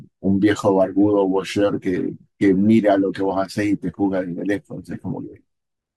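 No technical faults can be heard anywhere in the recording.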